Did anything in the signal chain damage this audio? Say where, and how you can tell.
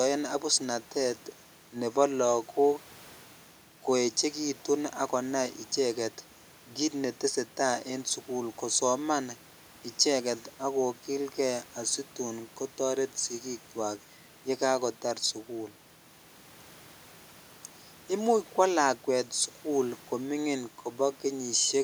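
No, nothing in the signal chain has audibly damaged this speech recording. None of the stages, from capture through to playback, has left a mark that can be heard.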